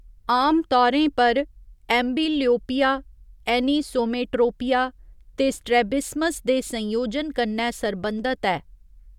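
No technical faults are audible anywhere in the recording.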